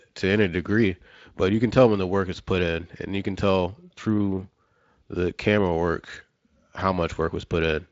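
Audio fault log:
No fault found: the speech comes through a Speex link with its content reaching up to about 7.6 kHz, and the signal holds steady throughout.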